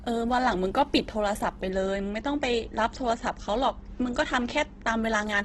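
Throughout, the speech has likely been squeezed by heavy Opus compression at a bitrate pointing to around 12 kb/s. Starved of bits, the encoder fills bands with folded or noisy content, so the speech sounds rough and grainy, with nothing above 12.1 kHz.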